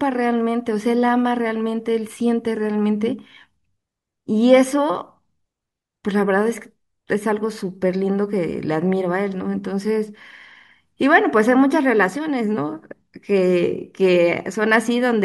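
No technical faults are audible.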